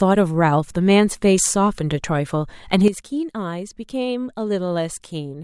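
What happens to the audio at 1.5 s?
At 1.5 s the speech carries on without any audible fault.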